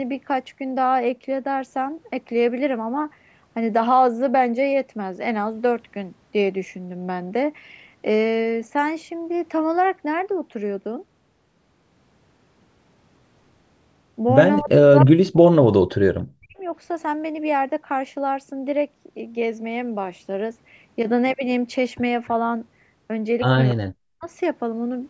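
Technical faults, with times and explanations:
14.6–15.48 s, 15.64–16.62 s and 23.72–24.24 s: speech suppressed in double talk. The speech dips hard in each window, falling by roughly 40 dB at its deepest. The affected stretches last well under a second, about a second and half a second. The likely cause is the far side talking at the same moment. The echo canceller could not tell this talker from its own loudspeaker echo, so it pulled everything down.
15.00–15.04 s: echo leak. A brief scrap of the voice returns about 290 ms late, roughly 10 dB below the direct speech. It is short, heard as a repeat inside the first suppressed stretch. The likely cause is a speakerphone whose echo canceller left part of the loudspeaker sound in the microphone signal. That residue was sent back down the line.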